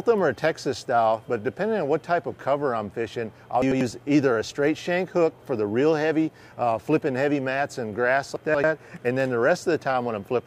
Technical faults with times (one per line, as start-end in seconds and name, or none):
3.62-3.81 chunks out of order
8.36-8.64 chunks out of order